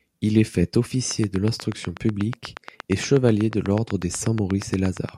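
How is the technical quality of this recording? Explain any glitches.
The recording has one clear fault. After "est fait", from 1.11 s to 5.10 s, a train of clicks ticks regularly at 8.3 per second. There are about thirty, standing well above the speech. The likely cause is interference or a faulty connection or power supply.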